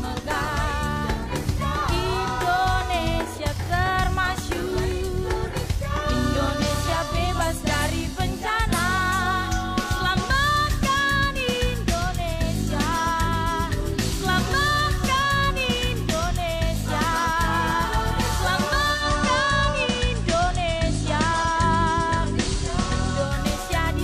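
At 18.91 s the receiver drops its digital stream and blends to the FM analogue signal over about 171 ms. This is digital radio blending to analogue. Hiss rises to roughly 30 dB below the signal. Level shifts about 1 dB. Digital returns at 23.41 s.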